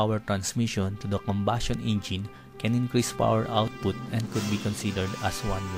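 From 0.70 s to 5.08 s there are word clock ticks, about five of them, roughly one per second. The receiving device runs on its own clock, a mismatch of roughly 20 ppm, so every time the clocks slip past each other a single sample is dropped or repeated. Each slip is a sharp click of uneven strength. On a spectrogram these show as thin vertical broadband lines evenly spaced; on the waveform, as tiny one-sample steps or kinks.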